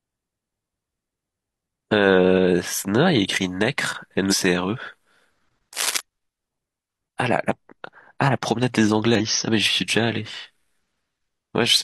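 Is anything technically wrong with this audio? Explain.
Yes, there are two kinds of fault. Damaged data in a compressed stream at 4.28–4.34 s and 9.15–9.21 s: corrupted frames make the decoder lose sync and resync, giving a brief chirp, squawk, click or short hole. Cable scratch noise from 5.73 to 6.01 s, likely from a worn connector being moved, adds rough, uneven scratching about 5 dB below the speech.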